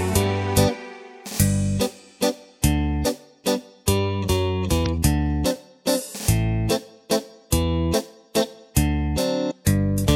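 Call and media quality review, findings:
Damaged data in compressed stream, 4.82–4.87 s: brief glitch, about 44 ms. Probable component: decoder input, with corrupted or missing bytes in the coded bitstream. Decoder misreads or rejects the affected frames, loses sync, then rescans for the next valid frame header before output resumes.

Damaged data in compressed stream, 9.47–9.52 s: same blip signature, about 52 ms. Same mechanism: corrupt frames break decoder sync until the next header is found.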